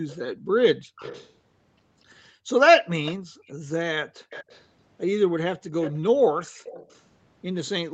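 From 0.08 to 1.33 s a faint delayed copy of the speech trails the talker by 242 ms, well below the direct sound. This echo leak is likely a far-end loudspeaker whose echo canceller let some pickup through. Between 0.35 and 0.96 s the room background dips by up to about 40 dB for under half a second in total. That is background gated by the echo canceller, which turns the microphone down hard while it hears playback. The same gating returns from 2.32 to 4.3 s, cutting the background for under a second in total. The echo comes back from 2.9 to 4.64 s, again 242 ms late. A brief gate of about a tenth of a second hits at 5.6 s. The echo then returns from 5.81 to 7.69 s.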